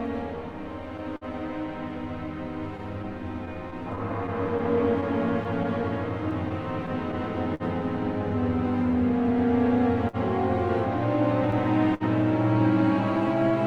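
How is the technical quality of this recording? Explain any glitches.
The recording carries several network-timing glitches: a steady clock drift, two short stalls and two stretches of scattered short gaps.

Throughout the 13.7 seconds there is clock drift between sender and receiver. The sending clock runs slow, by roughly 3 percent, so the receiver's jitter buffer keeps draining and must pad or repeat tiny pieces to keep playing. You hear small, irregular timing hiccups spread unevenly across the clip. On a waveform these appear as occasional slight discontinuities. A spectrogram shows brief vertical seams or tiny smeared repeats at uneven spacing.

At 1.16 to 1.24 s and again at 11.94 to 12.03 s there is a short stall from a late packet. Each time a packet missed its slot and the buffer ran dry. The receiver held the last sound for about 50 ms and then about 58 ms, and resumed exactly where it left off once the packet arrived. 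Nothing is lost, but a sound hangs a beat too long with a faint buzz or dip. The spectrogram shows horizontally stretched, frozen bands, and the waveform shows a repetitive, slightly dipped stretch.

From 2.77 to 7.63 s, and again from 8.92 to 10.16 s, there are scattered short gaps. The first stretch has around fifteen, the second around three, none longer than about 50 ms. Each lost or late packet was patched by extending the preceding sound. The result is brief ticks, smears and hiccups dotted through those spans. On a spectrogram they show as small blurred patches where detail flattens. The waveform shows short, overly regular repeated segments.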